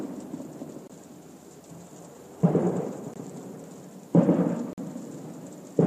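Blocks of digital silence at 0.88–0.90 s, 3.14–3.16 s and 4.73–4.78 s cut this sound recording out abruptly and back. The first two last about 21 ms each, fitting an unfilled 1024-sample output buffer. The third is a longer 47 ms hole.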